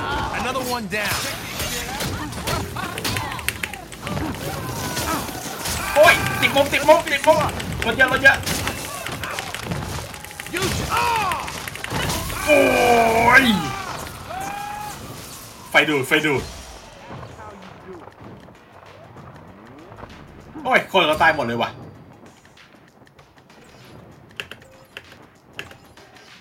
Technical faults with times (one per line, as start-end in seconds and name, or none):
none